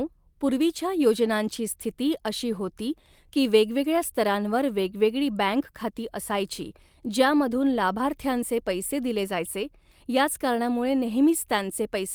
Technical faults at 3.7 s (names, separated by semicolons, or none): none